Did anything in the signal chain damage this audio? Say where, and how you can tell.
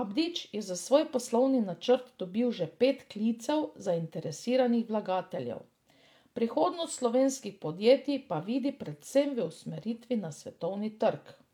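No, nothing in the signal chain has damaged this speech recording. No stage, from capture through to playback, leaves any audible mark on it.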